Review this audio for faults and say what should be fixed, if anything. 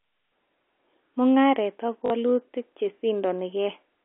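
There's a short robotic stutter at 2.06 to 2.10 s from packet loss with the last packet repeated. About 40 ms went missing, which fits two 20 ms packets, and the receiver replayed the previous chunk to fill the gap. The run buzzes at around 50 Hz. It sits inside the narrow 300 to 3400 Hz telephone band of the G.711 line. A larger jitter buffer plus proper packet loss concealment that blends rather than repeats would smooth this over.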